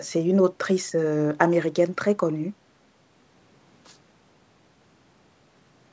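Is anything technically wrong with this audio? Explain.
No, nothing is technically wrong.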